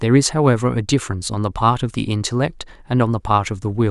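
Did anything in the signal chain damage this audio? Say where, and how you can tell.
No, nothing in the signal chain damaged this audio.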